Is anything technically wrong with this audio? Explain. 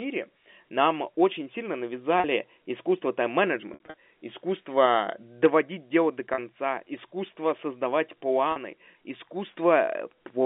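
Yes. There is packet loss with pitch repetition, heard through a narrowband telephone line in G.711 coding that sounds like 64 kbps A-law.

At 2.20 s after "нам очень сильно", 6.34 s before "искусство создавать", and 8.52 s, about 40 ms drops out each time. Between 3.74 and 3.94 s, before "искусство доводить дело до", 120 ms is lost in scattered gaps, the longest 60 ms. The receiver repeats the last pitch cycle, producing a held, buzzy tone. In the waveform these gaps appear as identical repeating cycles that fade, and in the spectrogram as flat, frozen harmonic stripes.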